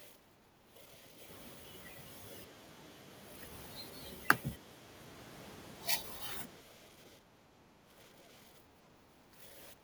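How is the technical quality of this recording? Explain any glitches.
The speech is repeatedly pushed down by speech suppressed in double talk, from 0.07 to 1.2 s, 7.17 to 9.53 s and 9.72 s to the end. The level sags by roughly 10 to 15 dB, most deeply in the middle stretch. This is likely an echo canceller turning the near talker down along with the echo it cannot separate. The speech dips during these stretches.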